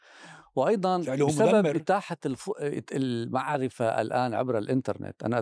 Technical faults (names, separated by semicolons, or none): none